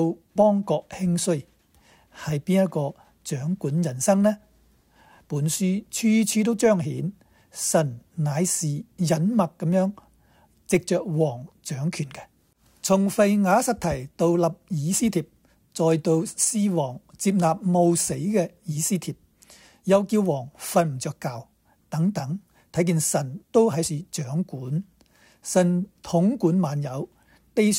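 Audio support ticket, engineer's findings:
Sample clock jitter, 13.29–16.34 s. Hiss and roughness riding on the signal, strongest on loud, bright passages, gone in quiet gaps. Probable component: converter clock. Sampling instants wander by a few microseconds; error tracks waveform slope, sitting roughly 30 dB below signal.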